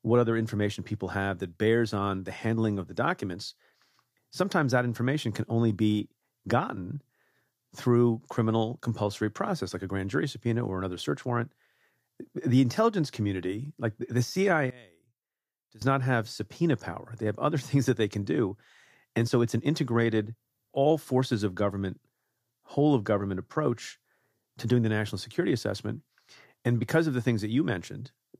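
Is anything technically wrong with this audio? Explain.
Yes. From 14.70 to 15.82 s, after "intelligence community like the" and before "not have subpoena power", the speech drops by about 25 dB to a faint residue. The likely cause is one channel inverted: opposite-polarity channels cancel their shared centre content when summed to mono.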